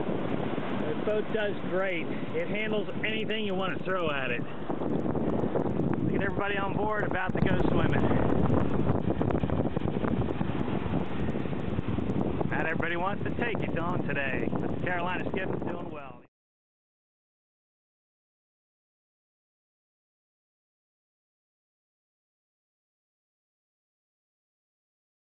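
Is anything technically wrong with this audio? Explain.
Yes, throughout the clip the resampler restarted on every block. Each block, about 100 ms long, was converted separately, which fits a 24 kHz to 16 kHz conversion. The resampler lacked neighbouring samples at each block edge, leaving faint ticks at a steady 10 Hz. Unlike dropouts, no audio goes missing, and the ticks fall silent whenever the signal does.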